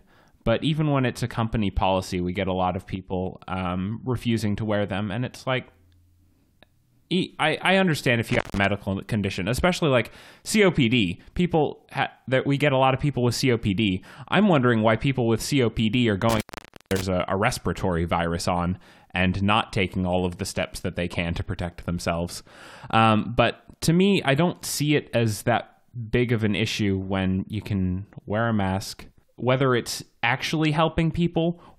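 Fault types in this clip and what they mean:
One channel drops out: From 2.96 to 3.13 s, between "get a lot of" and "um refusing to wear", the speech abruptly falls by about 6 dB for roughly 0.17 s and then snaps back. The likely cause is one stereo channel going silent, leaving only half the shared signal in the mono sum. On a waveform the envelope halves with vertical edges. On a spectrogram the whole band dims evenly, with no change in spectral shape.
Intermittent contact: A loose connection opens twice, cutting the speech with crackle at each edge and leaving only faint hiss while open. The first break, after "I I understand" and before "condition especially like", starts at 8.29 s with the line open about 152 ms. The second starts at 16.29 s, open about 502 ms, just before "a a respiratory virus". A waveform shows a near-flat gap bracketed by sharp spikes. A spectrogram shows broadband clicks framing a faint, featureless noise floor.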